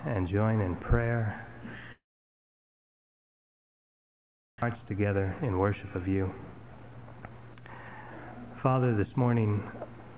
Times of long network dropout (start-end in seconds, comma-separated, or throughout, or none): 1.92-4.64